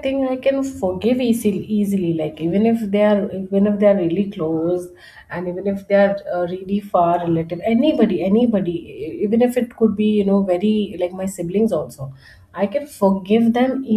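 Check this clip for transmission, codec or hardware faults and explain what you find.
Nothing faulty can be heard anywhere in this speech.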